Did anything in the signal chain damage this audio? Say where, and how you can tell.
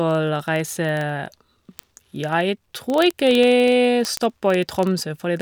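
Yes. Word clock ticks run through the speech from 0.11 s to 5.41 s, at roughly 25 per second. They are sharp and of uneven strength. This points to a digital link read by an unlocked receiver, with the clocks drifting by something like 500 ppm and a single sample slipping at each pass.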